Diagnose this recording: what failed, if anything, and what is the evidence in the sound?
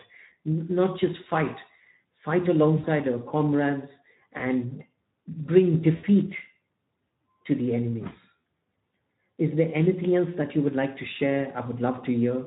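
The codec stage failed: Speex coding damage runs through the whole speech clip. The voice is hoarse and noisy from a starved excitation signal, which fits a low Speex setting around 11 kbps. Because it is constant rather than bursty, it points to the codec, not the network.

The network stage dropped packets, and the speech codec concealed the loss at 2.77–2.87 s, 4.37–4.45 s, 5.95–6.05 s and 8.38 s. At each point the voice is stretched and fades instead of going silent or clicking, because the decoder stretches its last pitch and filter. The 60, 20, 80 and 60 ms gaps fit lost 20 ms frames.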